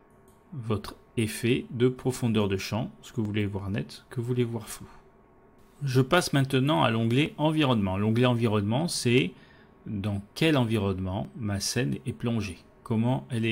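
Skips at 3.25, 7.26 and 11.25 s, spaced 4 s apart, mark an overlap between stream segments. Where mistimed 4-second segments meet, the player trims a sliver of real sound, so the waveform jumps. Unlike a dropout, nothing falls silent: the audio just skips.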